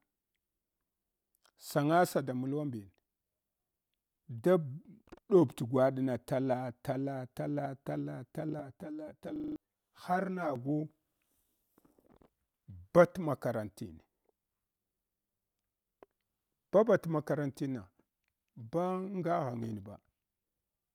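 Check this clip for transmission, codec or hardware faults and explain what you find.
Two faults appear, overlapping in the middle of the speech.

From 8.59 to 10.56 s the speech turns hollow and phasey, with a thin, notched quality. This is channel delay (comb filtering): one channel arrives around 10 ms late, and summing to mono cancels shared content at evenly spaced frequencies starting near 50 Hz.

From 9.36 to 9.56 s the sound becomes a rapid, mechanical stutter as one 40 ms fragment repeats five times at 25 Hz. This is a system hang loop: the system froze while the hardware kept cycling its ring buffer, replacing roughly 200 ms of audio.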